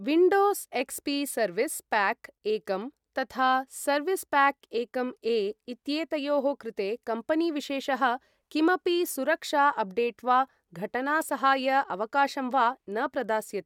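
Nothing stood out as a technical problem on listening to the speech.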